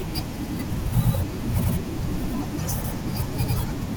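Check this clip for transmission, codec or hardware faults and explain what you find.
The speech stutters at regular intervals: a 100 ms fragment plays twice at 0.44, 1.04, 1.64, 2.24, 2.84 and 3.44 s, every 0.6 s. These are overlapping chunks: each 0.5 s block begins before the previous one finished, so every join replays a sliver.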